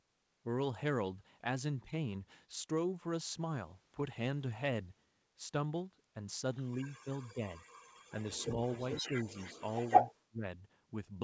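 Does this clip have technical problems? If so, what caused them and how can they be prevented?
Yes. There are two kinds of fault: echo leak and speech suppressed in double talk.

Echo leak appears from 6.71 to 7.33 s as a faint delayed copy of the speech, 242 ms behind and about 20 dB down. From 7.55 to 10.15 s it returns much stronger, 177 ms behind and only about 5 dB below the speech. The likely cause is a far end playing the call on a loudspeaker, where the echo canceller left part of the microphone pickup in the signal and sent it back. Prevention: have the far end use a headset, or improve its echo canceller's adaptation to the loudspeaker-to-microphone path.

Speech suppressed in double talk causes dips in the speech while both sides talk at once. These occur at 7.04 to 7.08 s (slight), 7.33 to 7.43 s (around 10 dB), 9.02 to 9.31 s (slight) and 10.02 to 10.47 s, where the level falls by roughly 30 dB and the speech nearly drops out. 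The echo canceller likely could not tell local speech from echo and attenuated both. Prevention: tune the canceller's double-talk detection so that it protects local speech rather than suppressing it.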